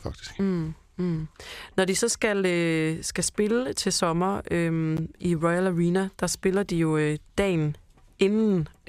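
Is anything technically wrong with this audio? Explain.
Yes, there's one glitch. At about 4.97 s, right after "skal spille til sommer", the speech drops out to dead silence for about 12 ms and then carries on. That gap is most likely a Bluetooth stall: interference held up the wireless packets, the headphone buffer briefly ran empty, and playback sat silent until the resent data caught up.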